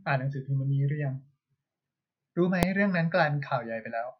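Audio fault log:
2.63 s, invalid numbers at full scale: a single sharp bang cuts through the speech. A calculation produced infinite or invalid values, which were forced to the largest possible sample value. The block pinned at one extreme value lasted under a millisecond, which fits a 32-sample block, too brief to hear as anything but one click.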